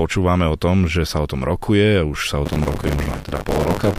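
Buffer tearing from 2.45 s to the end: writer and reader cross every period, so about a third replays older audio, giving a robotic 100 Hz buzz.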